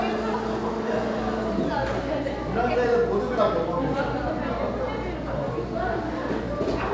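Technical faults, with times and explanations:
The sound has passed through a WebRTC call path, with its content stopping at about 8 kHz in the way a G.722 wideband call codec limits the band, and no technical faults are heard anywhere in the clip.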